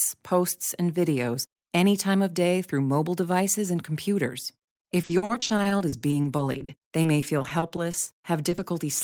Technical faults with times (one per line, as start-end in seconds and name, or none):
5.01-8.62 repeated packet loss (robotic sound)